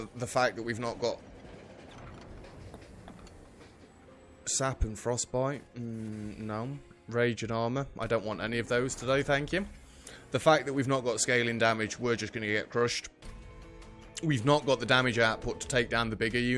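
No audible technical faults anywhere in the clip.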